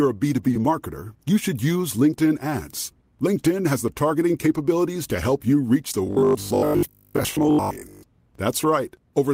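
A speech recording with two technical faults. From 0.51 to 0.55 s, just before "marketer you should use", there is short concealed packet loss: about 20 ms of audio never arrived in time, and the decoder covered the gap by extending the preceding sound and then crossfading back into the real signal. The result is a brief smear at that point rather than a clean dropout. From 6.07 to 8.05 s, right after "help you reach the", the speech takes on a rigid, metallic buzz near 50 Hz. This is robotic sound from repeated short buffers. The likely cause is audio arriving too slowly, so the playback side kept looping its most recent segment of roughly 20 ms (one period of the 50 Hz buzz). Much of the real signal in that stretch is skipped, and the repetition imposes a fixed pitch that only loosely tracks the speech.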